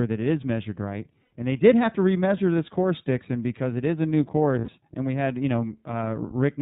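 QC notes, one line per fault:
throughout: iLBC codec. The speech is squeezed into a narrowband channel with nothing above 4 kHz, so it sounds muffled and telephone-like. Each 30 ms frame has its excitation coded on its own, which fits a rate of about 13.33 kbps, and that leaves the speech plainly rough and a little synthetic.
1.23–1.33 s and 4.59–4.69 s: lost iLBC frames. Right after "it is measured right" and again after "it is a new", about 90 ms drops out, which points to three 30 ms frames lost each time. The decoder fills each gap by repeating the last pitch cycle blended with noise, so it is heard as a short held, buzzy vowel. Since iLBC frames don't depend on earlier ones, the speech comes back cleanly as soon as the gap ends.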